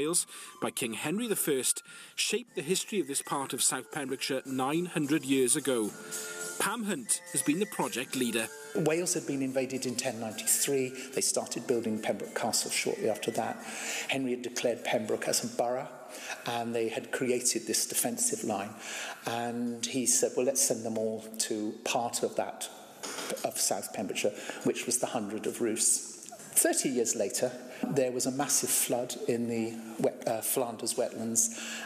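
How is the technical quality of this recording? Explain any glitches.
No glitches or faults can be heard anywhere.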